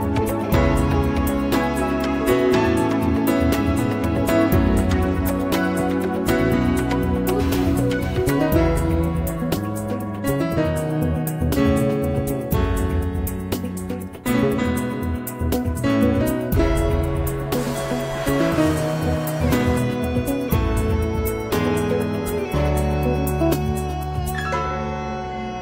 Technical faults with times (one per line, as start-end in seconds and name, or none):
none